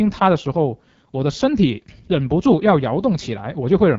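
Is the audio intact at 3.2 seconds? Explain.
No. At 3.2 seconds, as throughout the clip, the speech sounds rough and raspy, with nothing above 7.6 kHz. This is AMR wideband (HD Voice) codec damage: the pulse-driven vocal tract model runs short of bits, which fits one of its lowest rates, around 8.85 kbit/s.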